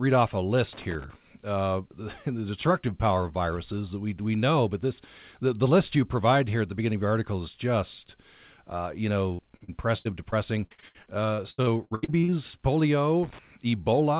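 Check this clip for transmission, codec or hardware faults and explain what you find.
Two kinds of fault are audible in this speech clip: loose connector crackle at two points, and repeated packet loss with a robotic character near the end.

Loose connector crackle occurs from 0.73 to 1.15 s, right after "off a", and again from 13.23 to 13.39 s. A worn or dirty contact in the analogue chain is intermittently opening and closing, chopping the signal on and off. Any DC offset on the line turns each make and break into a pop. The result is an irregular scratchy burst laid over the speech for those few hundred milliseconds.

Repeated packet loss (robotic sound) runs from 9.34 to 12.34 s, starting just after "is just uh you". Over this three-second stretch the audio breaks up into roughly twenty short holes, the longest about 79 ms. Each one is patched by extending the last stretch of sound. 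Concealment covers a little over a quarter of the span, and the next gap arrives before the previous one has settled. This gives choppy, robotic-sounding speech with fragments missing.

The call audio is band-limited, with nothing above 4 kHz. That is consistent with G.711 A-law at 64 kbps telephone bandwidth.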